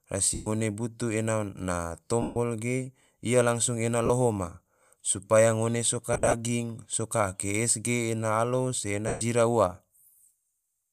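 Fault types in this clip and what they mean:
Lost LE Audio frames: at 0.34–0.47, 2.22–2.36, 4.06–4.10, 9.08–9.21 s and in short scattered gaps over 6.13–6.34 s, missing frames are replaced by the last spectrum with randomised signs, so speech smears into a noisy, fading blur for about 40–140 ms.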